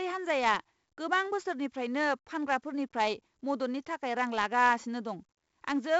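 The whole clip carries heavy 4-bit ADPCM compression damage. Each sample is coded as a coarse step from a prediction, so a gritty hiss rides on every loud stretch of speech and tracks its level, and sharp onsets crunch where the step size can't ramp up fast enough. There's also nothing above about 7.7 kHz, which dulls the top end and fits a roughly 16 kHz sample rate at 4 bits, around 64 kbps.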